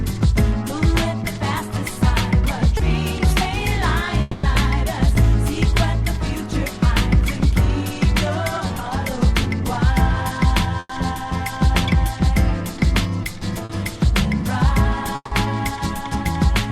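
At 2.77 to 2.81 s there is a short concealed packet loss. About 20 ms never arrived, and the decoder papered over it by extending the preceding sound before blending back. It comes across as a tiny smear or wobble. On a spectrogram the harmonics or noise texture briefly freeze into a smooth, repeated slice, and the waveform shows a stretch of suspiciously regular cycles.

From 4.21 to 4.45 s comes what is likely a long network dropout. Roughly 220 ms of audio is gone, and all of it is filled with a continued, fading buzz or hiss with no drop to silence. The spectrogram shows a flat, smeared band losing energy, and the waveform shrinks steadily before the real signal jumps back in further on.

The same short concealed packet loss recurs at 8.67 to 8.71 s (about 20 ms) and at 13.65 to 13.71 s (about 40 ms), each a brief frozen patch with a wobble.

At 10.79 to 10.91 s a burst of packet loss removes about 100 ms. 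The receiver holds the last sound, then lets it fade, and roughly 30 ms of near-silence follows before audio resumes with the middle missing. Visually this appears as a stretched, decaying band ending in a narrow gap.

At 15.15 to 15.33 s there is another likely long network dropout, with about 160 ms lost. A fading extension fills it, and about 40 ms of silence shows as a clear notch before the return.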